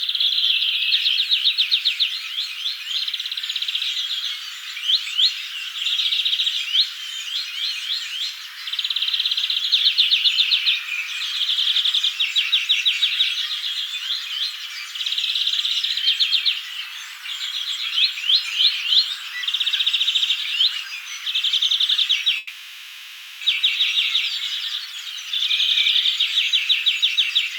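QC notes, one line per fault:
22.37–23.43 s, call audio freeze: the sound stalls and the last moment carries on as a fading buzz or hiss for about 1.04 s, then resumes exactly where it stopped with nothing lost. This is likely a jitter buffer running dry while packets were held up.
24.58–25.31 s and 27.00–27.56 s, jitter buffer speed-up: in each stretch the audio runs about 7% fast at unchanged pitch and sounds hurried. The receiver is trimming its excess buffered delay, removing around 50 ms per stretch as many tiny pitch-period slices.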